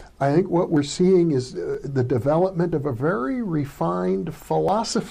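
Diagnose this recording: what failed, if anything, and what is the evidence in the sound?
Abrupt skips at 0.77, 1.75, 2.73 and 4.69 s, each dropping about 20 ms, are audio missing between chunks, likely at the driver or buffer stage. One-second chunk handovers lose a sliver and butt-join the ends. The waveform shows a sudden step, and the spectrogram a thin vertical broadband line.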